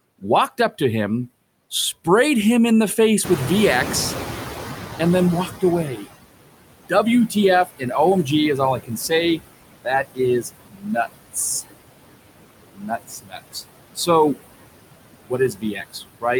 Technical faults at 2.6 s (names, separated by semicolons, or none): noise suppressor artifacts